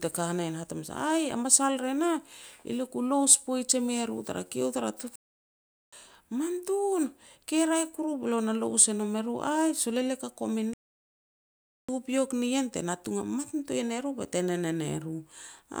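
At 5.16 s the speech cuts to silence for about 0.77 s, resuming at 5.93 s; a second, longer gap runs from 10.74 s to 11.89 s, about 1.15 s, falling between "elia ka" and "nien te natung". Both are playback stalls: the output drops out mid-flow and then continues. The likely cause is the player running short of buffered data, or its audio thread being blocked, so nothing reached the output until it caught up.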